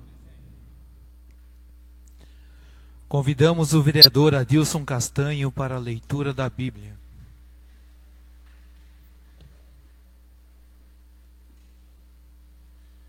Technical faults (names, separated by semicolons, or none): corrupt frame decoded